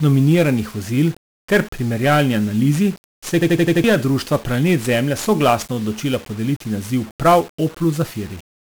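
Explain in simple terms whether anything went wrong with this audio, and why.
Two things went wrong. The whole recording carries 1-bit DFPWM compression, a very crude way of storing sound in which each moment is reduced to a single up-or-down step. That leaves a constant fuzzy, crackly roughness over the speech and buries the crisp upper sounds in hiss. This grit moves with the voice and is heaviest where the speech is, because the coding itself produces it.

From 3.41 to 3.84 s there is a system hang loop. The computer briefly froze while the sound hardware kept replaying the last chunk it held. One slice of about 85 ms repeats exactly five times, giving a mechanical stutter of about 12 repeats per second. That chunk size fits a 4096-sample buffer. Nearly half a second of new speech is lost. Unlike an echo, the copies don't fade, and unlike a dropout, the gap is filled with identical repeats rather than silence.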